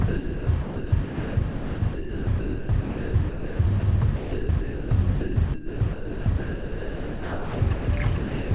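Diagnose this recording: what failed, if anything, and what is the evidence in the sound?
Sound chopped by the voice detector, at the call-processing stage: from 0.08 to 3.83 s, 4.16 to 4.91 s and 5.21 to 7.88 s, the sound repeatedly gives way to flat synthetic hiss, about 2.6 s, 0.63 s and 2.13 s in total. The likely cause is sender VAD gating with comfort noise, not network loss, which would leave glitches or repeated fragments instead.

Sound dropped by the voice detector, also at call processing: from 8.18 to 8.51 s, the sound is replaced outright by 0.33 s of steady comfort noise, band-limited below 4 kHz like the narrowband call path. It is a single clean handover to noise rather than flickering, likely the detector judging a quiet tail as background.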